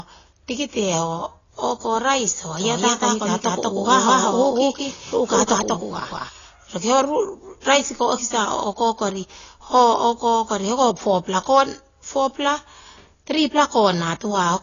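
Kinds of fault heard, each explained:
AAC compression: throughout, the speech is dull and smeared with nothing above 7 kHz, likely a low-bitrate AAC encode discarding upper bands, which fits roughly 24 kbps.
Doubled audio track: from 2.57 to 6.29 s, a dry second copy trails about a fifth of a second behind at similar loudness, likely a duplicate captured out of step, starting and stopping abruptly.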